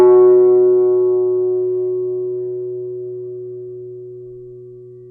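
From start to end the music sounds dull and band-limited, with a rough, fluttering noise clinging to tones. This is likely Dolby Digital compression at a low bitrate, around 64 kbps, where starved frequency lines are refilled with dither noise.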